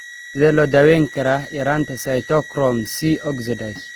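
From start to finish, a thin high whistle sits around 20 dB under the speech, wandering between 1.92 and 1.94 kHz: a switching supply whistle from a power supply running in audible burst mode or beating with another one.

Throughout, the speech also sounds grainy, rough and noisy in texture, with plainly audible damage, likely from Opus compression in its CELT mode, at a low rate near 16 kbps.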